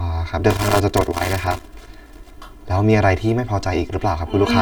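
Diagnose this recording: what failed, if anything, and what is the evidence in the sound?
Channel delay (comb filtering) runs through the whole speech clip. One channel arrives roughly 3 ms behind the other, and when the two are folded to mono, content common to both cancels at evenly spaced frequencies. The first notch sits somewhere near 150 Hz, with further notches repeating up the spectrum. That is why the speech sounds hollow and phasey throughout. The fault lies at the channel alignment and mono-summing stage, most likely a buffer or routing offset.

Loose connector crackle runs from 0.50 s to 2.30 s as an irregular burst of scratching and crackle over the speech. This is an analogue wiring fault. A worn or dirty contact is rapidly making and breaking, which chops the signal into fragments, and any DC present on the line turns each interruption into a pop. The crackle is bounded in time, which suggests the connector was moved or disturbed during that stretch.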